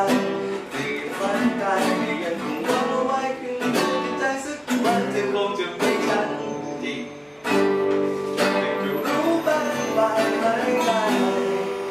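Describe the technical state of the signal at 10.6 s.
Timecode bleed runs from 9.22 s to the end. Linear timecode at 23.976 frames per second leaks in, chirping near 1 and 2 kHz, roughly 20 dB down.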